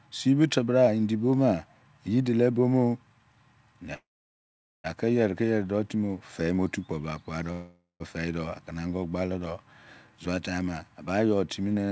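At 3.94 s and 7.52 s the speech halts in a call audio freeze, likely from delayed packets draining the jitter buffer. A brief fading buzz gives way to silence, about 0.82 s of the 0.9 s gap, then 0.17 s of the 0.48 s one. The waveform flattens and the spectrogram, already empty above 8 kHz, goes blank before speech resumes intact.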